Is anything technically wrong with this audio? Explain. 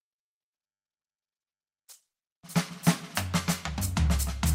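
Yes. From 0.54 to 3.38 s there is a call bitrate drop: the estimated bandwidth fell and the encoder was given far fewer bits, consistent with a fall from 48 to 15 kbps. The music turns coarse and muffled, worst for about 1.53 s, before recovering.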